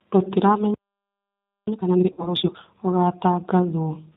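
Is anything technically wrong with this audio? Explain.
Yes. Three problems can be heard in this speech clip.

G.729 codec damage runs through the whole clip and is plainly audible. The sound points to G.729A at 8 kbit/s. This codec rebuilds each 10 ms frame from a vocal tract filter, a pitch predictor and a sparse excitation of four pulses in each half of the frame, and drops everything above 4 kHz. The result is band-limited, dull speech with a rough, slightly synthetic buzz in the voicing.

Time-compressed catch-up runs from 1.67 s to 2.59 s, at about double speed. After a playback stall, the player works off its backlog by cutting out short segments and cross-fading across the joins. Pitch is unchanged, but the speech is audibly rushed over those 0.92 s.

VoIP packet loss concealed by the speech codec occurs between 2.12 s and 2.32 s, inside the hurried section. About 60 ms of audio is missing, which fits three 20 ms packets. 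The decoder fills the gap by repeating its last pitch period and filter with falling gain, so the voice turns into a fading buzzy tone or coloured noise. Because each decoded frame depends on the previous one, the speech stays weak or distorted for a short time after the packets resume.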